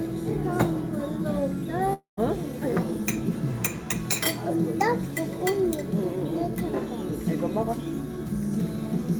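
From 1.93 to 2.20 s, a long network dropout likely cut off the incoming stream, so about 240 ms of audio never arrived. The receiver stretched the last sound into a fading buzz, then about 130 ms of silence, before the sound resumed without the lost part.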